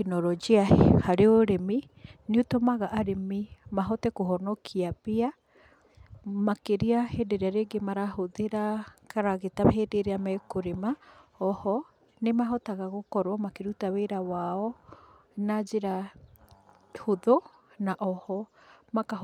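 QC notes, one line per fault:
No technical faults can be heard in the speech recording, and the signal stays steady and continuous throughout.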